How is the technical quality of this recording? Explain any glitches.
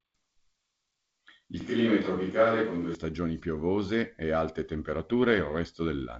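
The recording has one clear glitch, heard against a wideband telephone band that stops near 7.7 kHz with light G.722 coding hiss.

From 1.61 to 2.95 s, just before "piovose e alte", the speech turns abruptly roomy and hollow with thinner bass, likely a switch to a distant microphone after the close one dropped out. The level hardly changes, and faint room noise sits far below the speech. Added reverb would fade in and out, but this starts and stops with hard edges.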